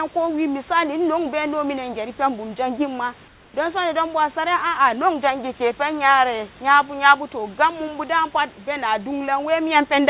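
From 3.28 to 3.54 s, the room background drops out for 260 ms, replaced by a steady, featureless hiss about 3 dB quieter: likely comfort noise in place of the background while transmission paused. A spectrogram shows the noise texture turning smooth and uniform below the 4 kHz ceiling; the waveform's floor dips slightly and evens out.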